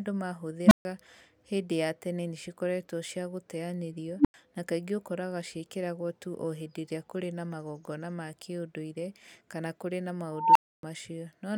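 At 0.66, 4.19 and 10.32 s an unstable filter diverges. Tones near 200 Hz, 300 Hz and 1 kHz swell over 56, 62 and 238 ms, clip, then drop to silence for 139, 93 and 279 ms. That sudden reset silence distinguishes it from feedback howl.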